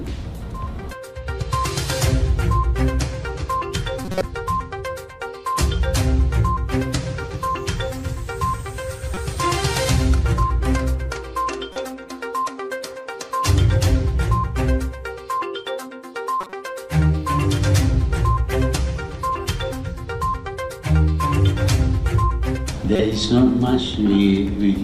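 Short chirps and noisy blips break through at 4.05 to 4.24 s, 9.14 to 9.17 s, 11.73 to 11.76 s, 16.41 to 16.53 s and 22.96 to 23.01 s. The first lasts longest, and the last is loudest. These are corrupt frames decoded: damaged bits in the compressed stream were played anyway. Misread gains and codes threw energy into the wrong frequencies for the span of a few frames each time.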